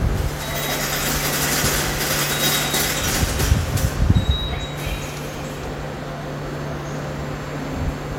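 Nothing in this recording of sounds stood out as a technical problem on listening.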